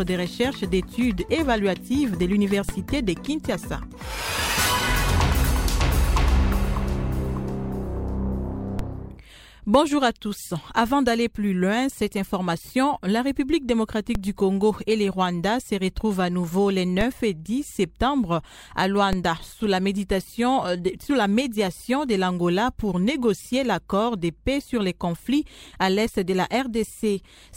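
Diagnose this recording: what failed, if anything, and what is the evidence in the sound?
The converter or analogue input stage failed, producing a DC step five times, at 2.69, 8.79, 14.15, 17.01 and 19.13 s. Each is a low thump as the waveform's zero line jumps, by about -14 dBFS for the first two and about -12 dBFS after. A 20 Hz high-pass then bleeds the offset away. Unlike a dropout or digital click, the sound carries on with no gap or sharp tick.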